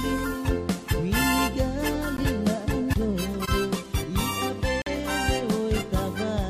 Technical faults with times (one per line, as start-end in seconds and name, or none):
2.17-2.20 Bluetooth dropout
4.82-4.87 Bluetooth dropout